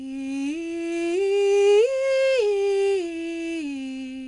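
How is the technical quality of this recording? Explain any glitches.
Poor: the music carries gritty, level-following hiss throughout, and nothing is heard above 10.6 kHz. From start to end, loud passages turn grainy and sharp attacks smear. This is 4-bit ADPCM compression, coding each sample as a small predicted step, which fits a 89 kbps, roughly 22 kHz stream.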